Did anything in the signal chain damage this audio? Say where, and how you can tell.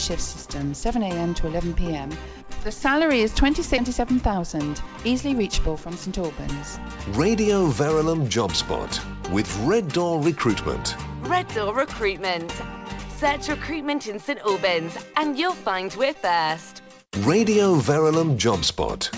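Yes. A skip ahead at 3.78 s, at the network or jitter buffer stage: roughly 0.4 s of audio is dropped, and the two sides join with no gap.

Jitter buffer speed-up from 3.88 to 6.07 s: the buffer trims pitch-period slices to shed about 0.2 s of backlog, so the sound runs about 10% faster at unchanged pitch.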